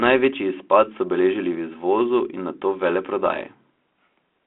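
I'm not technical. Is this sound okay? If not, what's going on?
No. At about 3.26 s the speech has a short pop and a brief rough, crackly burst where the loudness shifts for a moment. This is bit errors on an ADPCM link. The phone-style coding (G.726 ADPCM, as used in cordless phones) sends only small changes from its own guess of the next sound. When a few bits get flipped in transit, the decoder's guesses go wrong and take a few milliseconds to settle, producing that click and rasp.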